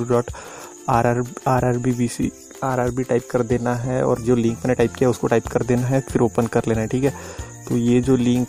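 No technical faults can be heard anywhere in the audio, and the signal shows no dropouts, distortion, level jumps or other defects at any point.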